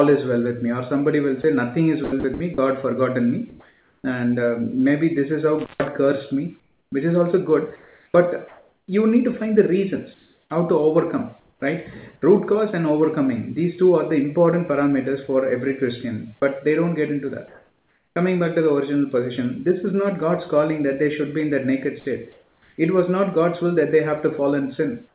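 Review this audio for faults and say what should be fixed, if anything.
From 1.42 to 4.04 s the sound is chopped by the voice detector. About 0.78 s of it is replaced in pieces. Likely cause: the detector toggling transmission on quiet passages. Lower the detector's sensitivity threshold.

From 6.6 to 11.62 s the same choppiness returns, this time for longer. About 1.68 s in total gives way to comfort noise. Quiet edges vanish. Add a longer hangover time to the detector.

An intermittent contact occurs from 5.58 to 5.88 s. The line opens for about 140 ms. The sound drops out with crackle at both edges, leaving faint hiss between them. Reseat or replace the loose cable or plug.

Comfort noise in place of the background appears from 17.48 to 18.16 s. The background there sits about 42 dB below the loud parts. It turns steady and featureless, about 1 dB different in level. Likely discontinuous transmission during the pause. 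Disable discontinuous transmission.

The onset clipped by the voice detector falls at 18.13 s. About 30 ms of the start is missing. The sound begins abruptly, with no soft attack. The detector likely reacted late. Shorten the detector's attack time.

At 22.0 s a sound is dropped by the voice detector. About 60 ms is lost and filled with noise. The detector likely took it for background. Use a less aggressive detection mode.

Comfort noise in place of the background also runs from 22.0 to 22.78 s. About 0.52 s of real background becomes flat synthetic noise. The ambient detail disappears until sound resumes. Keep sending background audio instead of silence descriptors.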